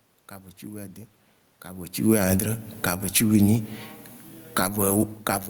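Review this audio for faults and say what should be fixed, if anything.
From 1.96 to 3.09 s and again from 3.76 to 4.74 s, the speech and the room noise sink together by about 11 dB and about 12 dB. This is automatic gain falling: the gain control judged the input too loud and gradually pulled its gain down.

From 4.65 to 5.41 s, voice and background swell together by about 10 dB. This is automatic gain rising, reacting to the input dropping about 24 dB when the talker moved back around 5.0 s.

Fixing the input gain, or slowing the gain control and giving it a hold time, would keep these level swings from happening.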